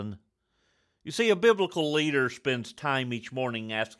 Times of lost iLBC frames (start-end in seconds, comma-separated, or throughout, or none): none